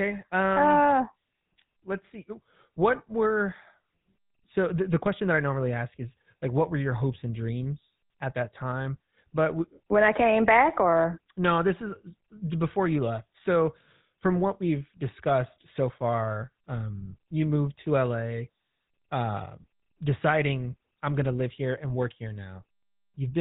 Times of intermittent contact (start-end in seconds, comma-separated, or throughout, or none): none